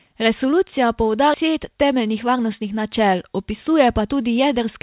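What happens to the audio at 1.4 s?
The speech jumps forward abruptly between 1.34 and 1.49 s, with about 0.4 s missing: a skip ahead, where buffered audio was dropped and playback resumed from later material.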